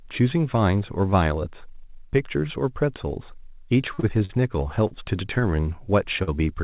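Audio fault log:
3.94 to 6.29 s, short stall from a late packet, five times (3.94, 4.00, 4.25, 4.87 and 6.23 s): a packet arrived late and the jitter buffer ran dry, so the receiver held the last sound for 30 to 43 ms, giving a brief drawn-out, slightly buzzy sustain. Unlike packet loss, nothing is dropped. The audio resumes exactly where it paused, and everything after each stall plays that much later.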